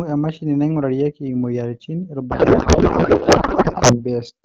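Speech clip where, from 2.31 to 4.04 s, the voice turns into garbled, warbling noise that barely tracks it: a codec payload misread, with octet-aligned AMR frames decoded as bandwidth-efficient.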